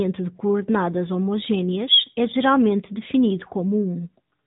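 From start to finish the speech carries AMR narrowband mobile codec damage. Nothing above 3.8 kHz survives. A vocal-tract model rebuilds each 20 ms frame from a few pulses. The result sounds plainly buzzy and synthetic, which fits a 10.2 kbps mode.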